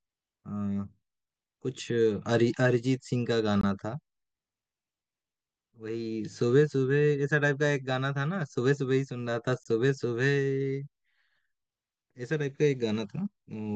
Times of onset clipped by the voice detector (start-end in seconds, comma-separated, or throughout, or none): none